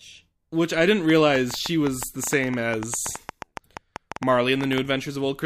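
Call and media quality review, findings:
Train of clicks, 1.10–4.79 s, starting just after "I didn't". Irregular ticking and popping over the speech and into the pauses, about 7.6 clicks per second, around thirty in all, peaks roughly 10 dB above the speech. Clicks near-identical in shape. Probable component: likely interference from nearby equipment or a faulty connection or power supply, repeatedly injecting a short pulse into the signal path at an uneven rate.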